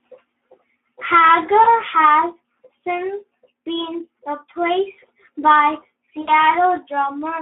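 Throughout, the speech carries Speex codec damage: a hoarse, noisy texture from too few bits spent on the excitation, which fits a rate near 11 kbps. The band is limited to roughly 250 Hz to 3.5 kHz, so it sounds thin and telephone-like.

At 1.63 to 1.68 s, and again at 6.21 to 6.30 s, VoIP packet loss concealed by the speech codec appears. The decoder stretches its last pitch and filter into a fading buzzy tone or coloured noise. The first gap fits a single lost 20 ms frame, and the second fits about 60 ms lost, with the distortion lingering until the decoder recovers.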